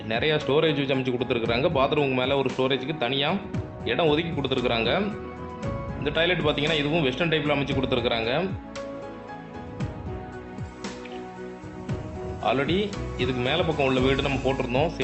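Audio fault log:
No faults are present: the signal comes through a WebRTC call path whose Opus coding leaves its usual coding noise and a top end that stops near 8 kHz, with a codec setting of 32 kbps.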